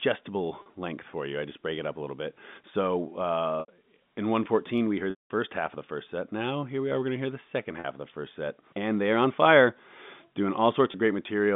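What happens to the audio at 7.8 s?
Packet loss with pitch repetition occurs from 7.80 to 7.84 s, between "to hear the second" and "of the first set". About 40 ms goes missing, which fits two 20 ms packets. The receiver repeats the last pitch period to fill the gap. It sounds like a brief, slightly buzzy held tone.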